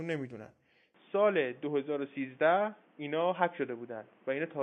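At about 0.94 s the speech suddenly goes dull and boxy and stays that way to the end, with nothing above 3.6 kHz, faint new background noise and no gap or level jump. That's likely the input switched to a poorer device.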